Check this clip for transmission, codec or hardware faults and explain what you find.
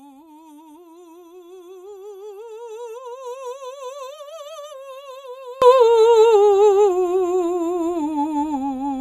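One fault is present, affecting the first part of the music.

From 0.0 to 5.62 s the music drops by about 25 dB and then returns to full level. The likely cause is one channel inverted: with one stereo side's polarity reversed, material common to both sides cancels when summed to mono. Unlike a dropout, the sound never goes fully silent; a much quieter residue remains throughout.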